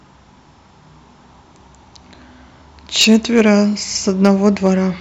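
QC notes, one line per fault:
2.99–3.50 s and 4.25–4.68 s: hard clipping, peaks driven about 5 dB then about 3 dB past full scale and cut flat, adding harsh high harmonics heard as crackle.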